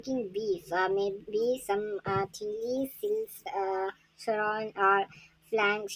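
From start to end the speech runs about 1.45 times too fast and sits about 6.45 semitones high. This is a wrong sample rate: audio recorded near 22 kHz was played at 32 kHz without conversion.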